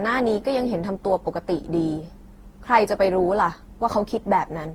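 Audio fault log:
Throughout, generation loss: the speech sounds swirly, smeared and hollow, with blurred consonant onsets and a grainy, churning texture that is worse than a single lossy encode at this quality would leave. Nothing survives above 20.2 kHz. The likely cause is repeated lossy re-encoding, around ten passes, consistent with an Opus chain at 48 kbit/s. Each pass quantises on a shifted frame grid, so noise builds up.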